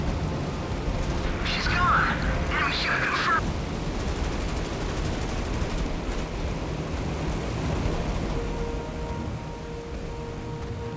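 No technical faults are audible.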